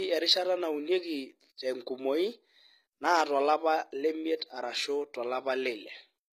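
Low-bitrate audio saved at a high bitrate, throughout: the speech keeps coarse artefacts from a very low-bitrate HE-AAC encode, likely re-encoded later as high-bitrate MP3.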